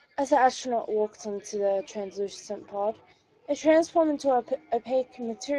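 A Speex codec stage runs through the whole speech clip, and the degree of damage fits a Speex stream at roughly 22 kbps. At that rate this CELP coder has too few bits to rebuild the excitation signal accurately, so each frame is approximated rather than reproduced. The result is plainly audible from start to finish: the voice sounds grainy and hoarse, with a roughened, noisy texture where clean voicing should be.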